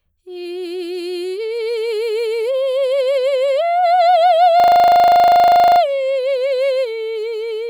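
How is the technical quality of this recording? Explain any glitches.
The music recording has one clear glitch. A system hang loop runs from 4.6 to 5.8 s. The playback system stalled while the sound hardware kept replaying the same stretch of its ring buffer, a 40 ms slice repeated 30 times, which fits a buffer holding about 40 ms of audio. Because the loop is so short, the music turns into a steady buzz at 25 Hz until playback resumes, apparently without skipping any material.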